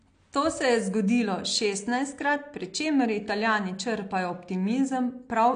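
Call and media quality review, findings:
AAC compression throughout, speech dull and smeared, plainly audible codec damage. Nothing above 9.8 kHz, likely a lowered encoder cut-off; sibilants fizzy and warbling from coarse quantisation of spectral lines, consistent with AAC-LC at a bitrate near 32 kbps.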